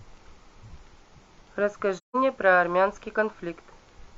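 Speech recording with AAC frame loss with muting from 1.97 to 2.16 s. The sound fades into a soft-edged silent gap of about 170 ms, which fits roughly four zeroed frames.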